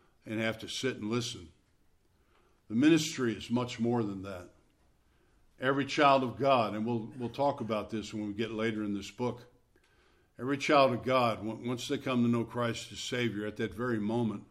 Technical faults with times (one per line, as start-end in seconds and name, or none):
none